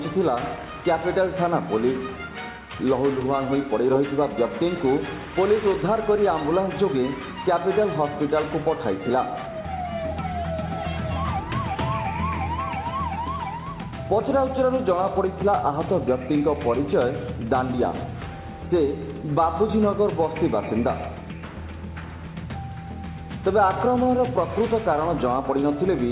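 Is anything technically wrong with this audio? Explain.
No, nothing's actually wrong here; the audio just carries the usual character of a phone-style call path, with its coding noise and nothing above about 4 kHz, which fits G.711 mu-law doing exactly what it's meant to do.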